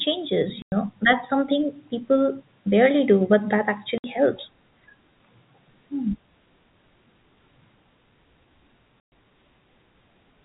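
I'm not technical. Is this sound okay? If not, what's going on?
No. The speech has three short holes from packet loss filled with silence, at 0.62 s (100 ms), 3.98 s (60 ms) and 9.04 s (120 ms). Chunks of audio never arrived, so silence was played instead. The hole lengths fit 20 ms packets.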